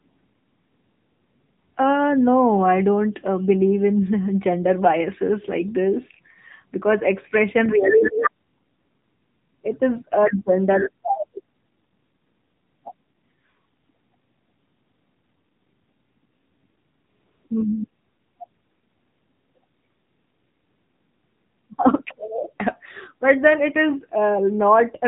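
For the whole clip, the speech has been squeezed through the AMR narrowband mobile codec. The audio was resampled to a narrow telephone band and rebuilt from a vocal-tract model excited by a few pulses per short subframe. Nothing above 3.8 kHz survives, so the speech sounds muffled and boxy. The damage is plainly audible as a buzzy, synthetic edge, which fits a mode around 7.95 kbps.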